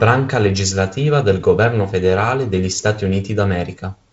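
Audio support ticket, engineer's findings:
No faults found.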